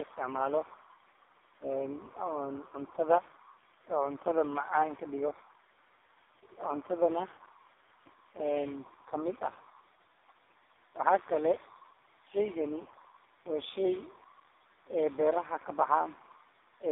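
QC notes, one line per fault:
Throughout: tandem speech coding, re-encoded by two codecs in a row, fitting GSM full rate then low-rate AMR-NB, compounding roughness and warble; nothing above 3.8 kHz.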